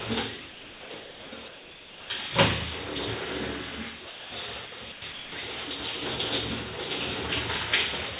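At 0.5–0.9, 1.0–1.32, 1.48–2.1, 4.1–4.32, 4.66–4.72, 4.92–5.02 and 5.12–5.32 s, the sound gives way to steady comfort noise and then returns. This is likely sound dropped by the voice detector, which treated the material as background and stopped sending.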